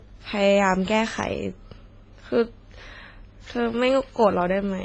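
Transcoding between lossy codecs runs throughout: nothing sounds above 9.5 kHz, and the layered artefacts likely come from WMA at 24 kbit/s re-encoded to AAC-LC at 32 kbit/s.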